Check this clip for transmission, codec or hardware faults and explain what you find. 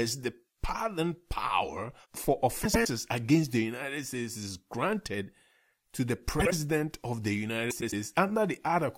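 Frames out of order occur three times in this speech, at 2.63–2.87 s, 6.39–6.52 s and 7.70–7.93 s. In each, two adjacent runs of frames were decoded in swapped order, so the stretch plays its second half first. The halves are about 105 ms, 52 ms and 105 ms long, which points to runs of roughly four, two and four frames. Each stretch sounds like a garbled flutter. No time is lost.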